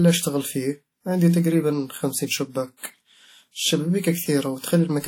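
Likely WMA compression at a low bitrate, which fits about 48 kbps, spreads quantisation noise across long blocks throughout, leaving the speech ringing and washy, with breathing hiss and nothing above 19.6 kHz.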